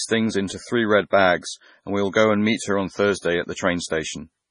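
Speech, heavily damaged throughout by what is likely MP3 compression starved of bits, which fits a bitrate near 24 kbps. The encoder removes everything above 10.5 kHz and zeroes weak frequency lines that flicker between frames, leaving the sound dull, watery and swirly, with smeared attacks.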